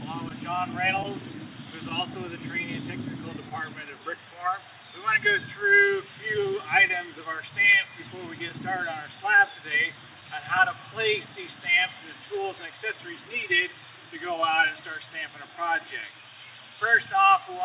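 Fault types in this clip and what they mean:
Clock drift between sender and receiver: A faint unevenness in timing runs through the whole clip, with small hiccups at irregular moments rather than any single obvious break. The sending end's clock runs roughly 1% slow against the receiving end's. The receiver's jitter buffer therefore keeps drifting toward empty, and it must keep stretching the audio to avoid running dry. The sound stays band-limited to 4 kHz by the call codec throughout.
Scattered short gaps: Tiny ticks and brief smears appear in two stretches, about three between 0.29 and 1.91 s and about seven between 6.88 and 11.03 s. Each is very short, the longest around 10 ms in the first stretch and around 15 ms in the second. These are individual late or lost packets. The receiver covered each hole by carrying the last sound forward, so nothing drops out outright and only a sliver of each stretch is affected.
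Repeated timing corrections: From 2.58 to 16.76 s the tempo feels very slightly unsteady, with occasional barely-perceptible stretches where sound seems drawn out for an instant. This is the receiver compensating for the slow sender. It repeatedly inserts short extra pieces, always lengthening rather than cutting, at uneven spacing. Together these additions come to around 100 ms, which amounts to playing the material at about 99% speed.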